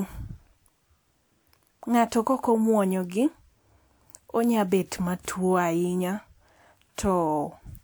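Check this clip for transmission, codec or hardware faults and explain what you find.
I find no faults to report in this clip.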